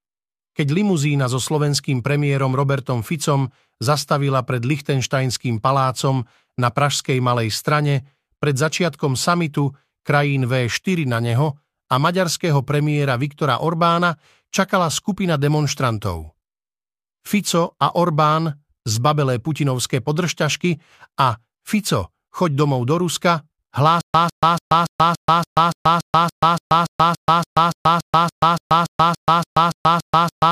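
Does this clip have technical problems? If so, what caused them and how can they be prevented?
Yes. From 24.01 s to the end, a stutter with silent gaps: a 153 ms fragment repeats 23 times, each followed by 133 ms of silence, every 285 ms. The likely cause is a stalled player replaying its last buffer while starved of data; deeper buffering and a steadier stream prevent it.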